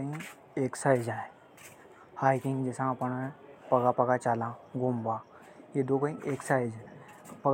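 No technical faults are audible anywhere in this recording.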